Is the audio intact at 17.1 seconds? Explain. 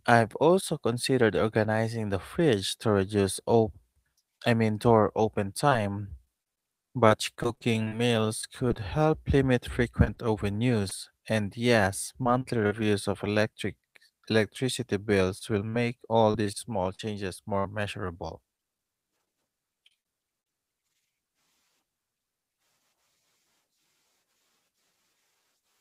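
No. Just after "of electric electricity", from 15.39 to 17.67 s, the speech suffers repeated packet loss, which gives it a robotic sound. Six holes, the longest 58 ms and about 200 ms in total, are each patched by stretching the preceding sound, so the span turns choppy. Unlike a single dropout, which leaves one clean gap or click, these concealed patches recur in quick succession across the whole stretch.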